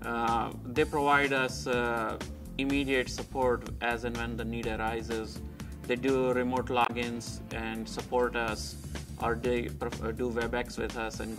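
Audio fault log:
6.83–6.90 s, damaged data in a compressed stream: a short glitch where the decoder hits corrupt frames, loses sync and skips ahead to the next clean header.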